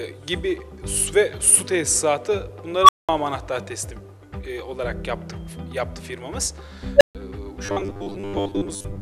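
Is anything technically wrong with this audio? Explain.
Yes, there are two problems. First, an unstable filter blows up twice: from 2.79 to 3.09 s a tone of roughly 1 kHz swells over about 93 ms, clips, then drops to 200 ms of silence. From 6.96 to 7.15 s a tone near 500 Hz does the same over about 44 ms, followed by 140 ms of silence. A recursive filter with bad coefficients is feeding on itself until it overflows and resets.

Second, from 7.66 s to the end the sound turns into a stiff, metallic 100 Hz buzz, the robotic sound from repeated short buffers. The likely cause is audio arriving too slowly, so the software loops a roughly 10 ms buffer and skips about half the real material.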